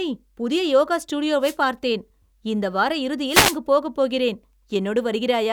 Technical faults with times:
1.41-1.56 wireless microphone noise hit
3.27-3.58 wireless microphone noise hit

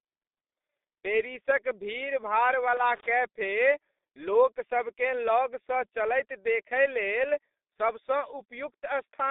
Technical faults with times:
0.00-9.31 G.723.1 codec
2.77-3.08 loose connector crackle

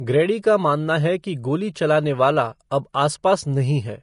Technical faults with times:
0.00-4.03 Vorbis compression

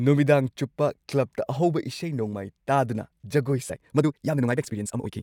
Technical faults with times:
3.67-5.22 time-stretched section

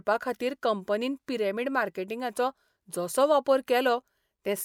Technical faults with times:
none

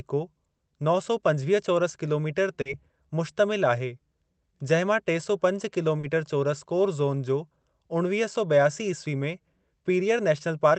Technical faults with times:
2.61-2.67 short concealed packet loss
5.99-6.05 short concealed packet loss
7.61-7.65 short concealed packet loss

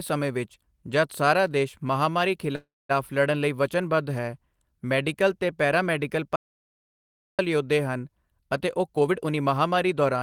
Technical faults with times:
2.55-2.91 call audio freeze
6.36-7.39 audio dropout to silence
8.65-10.22 jitter buffer speed-up

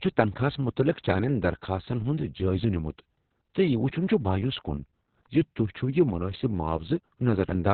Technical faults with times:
0.00-7.73 Opus voice compression

